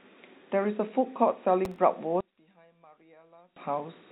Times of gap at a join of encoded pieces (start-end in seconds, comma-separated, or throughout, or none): none